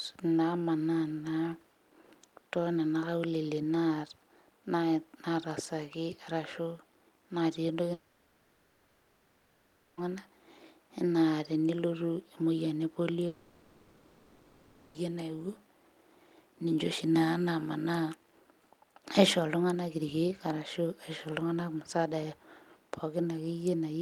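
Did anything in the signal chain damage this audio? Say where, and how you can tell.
Yes, likely a long network dropout: from 7.93 to 10.02 s and 13.27 to 14.96 s, concealment fills the gap with a fading continuation of the last sound, and the speech resumes with the missing stretch gone.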